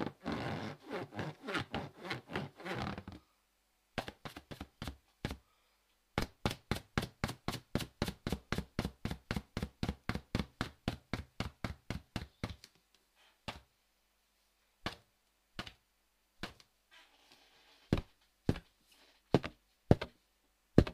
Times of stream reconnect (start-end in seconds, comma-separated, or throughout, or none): none